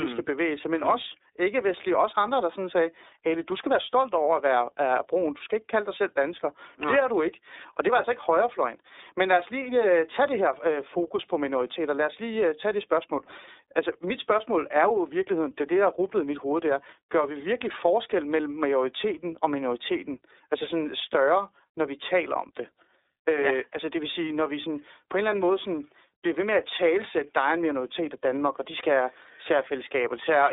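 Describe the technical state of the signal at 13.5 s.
At 13.5 s the speech carries iLBC codec damage, present for the whole clip rather than just this moment. The codec codes each 30 ms frame's excitation independently, so the voice sounds plainly rough and slightly synthetic, with a thin telephone quality from the 300 to 3700 Hz line band, which fits the 13.33 kbps mode. On a spectrogram everything above about 3.8 kHz is empty, with a hard ceiling and no low bass.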